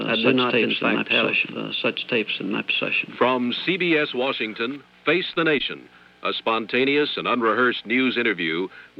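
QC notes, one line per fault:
0.0–4.76 s, doubled audio track: a second full-band copy of the sound runs about one and a half seconds behind at roughly equal level, with no decay or room colour, already under way at the start and cutting off abruptly, likely from a slower second capture path.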